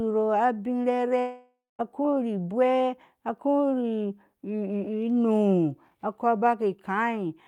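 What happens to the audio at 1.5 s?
A long network dropout runs from 1.19 to 1.81 s. The speech cuts off and its last sound is stretched into a fading buzz, followed by about 0.22 s of silence, likely because packets stopped arriving. Speech resumes with about 0.6 s missing.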